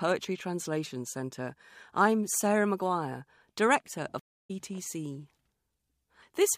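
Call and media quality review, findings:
Stream reconnect at 4.19–4.51 s: about 230 ms of dead air, then speech picks up roughly 0.2 s further on. Connection dropped, player rejoined the live stream with a fresh decoder.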